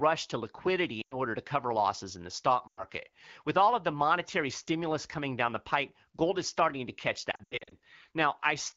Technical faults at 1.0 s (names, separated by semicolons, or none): lost AMR speech frames